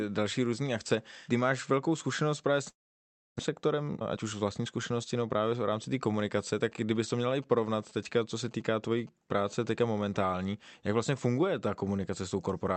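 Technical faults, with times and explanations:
2.69 to 3.41 s, long network dropout. Right after "velkou zkušenost právě s" the speech stops arriving. The receiver stretches the last sound into a buzzy, fading tail, then goes silent for about 640 ms. About 400 ms of speech is simply missing. When the sound returns it picks up further on. The likely cause is a stretch of lost packets, with the playout delay then shifting by roughly 300 ms.
3.49 to 5.30 s, jitter buffer speed-up. Speech now runs at 114% speed while the pitch stays the same. It sounds hurried. After the dropout the buffer held more audio than its target. To cut that delay, the receiver removed many short pieces of one or a few pitch periods in a row. Roughly 300 ms was trimmed this way before the pace settles.
6.63 to 9.46 s, GSM signalling bursts. After "v rámci té komunikace" a galloping dit-dit-dit of short buzzes enters, about 25 dB below the speech. 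A nearby 2G phone is signalling, sending brief groups of radio bursts at 217 Hz. The audio circuit rectifies these pulses into sound. The buzz comes in clusters, not as a steady tone, and it bears no relation to the speech.
9.47 to 10.56 s, GSM phone buzz. The pattern turns into a steady, raspy 217 Hz buzz rich in harmonics. It sits about 39 dB below the speech and ends before "jak vlastně funguje ta". The phone is now in a call and transmits steadily in bursts, 217 bursts a second. The audio circuit rectifies each burst into the buzz. Through all of this, the call codec's top end stops near 8 kHz.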